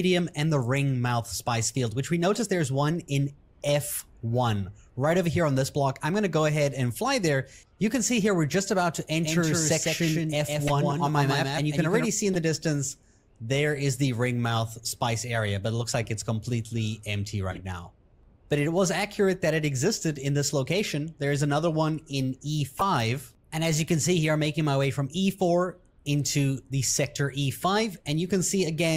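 Corrupt frames decoded at 2.34–2.42 s, 4.48 s, 10.66–10.71 s, 12.33–12.36 s, 16.03–16.08 s, 17.52–17.60 s and 22.75–22.82 s carried flipped bits that were played anyway, throwing energy to wrong frequencies as short chirps and noise bursts. The one at 10.7 s is the loudest.

From 9.23 to 12.05 s a doubled audio track appears, likely a second out-of-step copy mixed in, adding a dry repeat about 150 ms behind and about 5 dB quieter that starts and stops abruptly.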